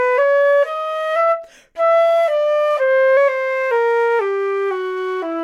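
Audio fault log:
3.17 to 4.19 s, drift correction step: the sound abruptly runs about 5.4% fast and rises about 91 cents, just under a semitone, then snaps back. This is likely clock-matching software stepping the playback rate at once to rebalance its buffer.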